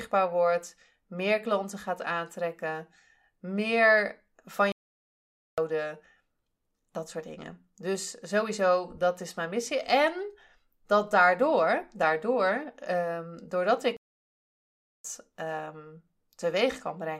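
The speech cuts out at 4.72 s, right after "gaat aantrekken meer van", and stays silent for about 0.86 s. At 13.97 s, after "ehm doordat", it stops again for about 1.08 s. Both gaps are playback stalls, likely the player running short of data before resuming.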